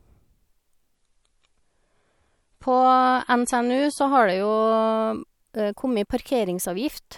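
From 0.95 s to 4.95 s the speech drops to an adaptive stream at a lower bitrate: for four seconds the top end vanishes above 11.5 kHz and MP3-style smearing rises, consistent with a switch from about 128 down to 48 kbit/s, then full quality returns abruptly, without a gap.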